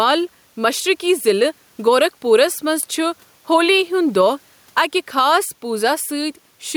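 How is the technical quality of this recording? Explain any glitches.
The recording has one fault that runs through the whole clip.

Gain pumping, present from start to finish: the input gain sounds set well above what the microphone needs, and the likely cause is a fast limiter or compressor clamping the level down each time the speech gets loud, then letting it rise again in the pauses. The gain swings by roughly 5 dB, and the room noise sits about 43 dB below the speech. Loud and quiet passages end up squeezed closer together, giving the speech a flattened, squashed quality.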